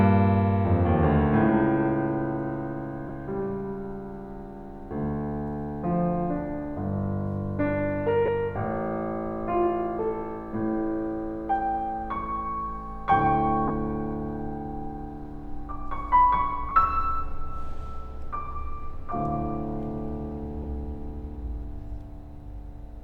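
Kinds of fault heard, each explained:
Lost LE Audio frames: Bluetooth LE Audio frames dropped out five times, four gaps of about 20 ms and one of 10 ms. The LC3 decoder filled each gap by repeating the last spectrum with randomised signs, so the music briefly turns into a short noisy smear.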